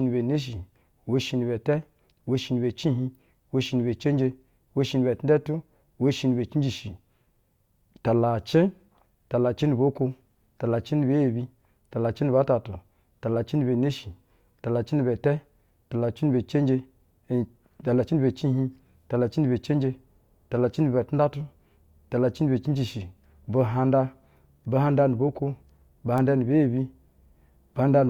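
Speech, marked by two bit error spikes. The first falls at 22.37 s and the second at 26.18 s. Each is a single sharp tick, broadband and unrelated to the speech around it. A flipped bit in stored or transmitted data makes a sample jump by a power of two and snap straight back. The first tick peaks at about -32 dBFS and spans three samples. The second is louder, at about -14 dBFS, and fits a single corrupted sample.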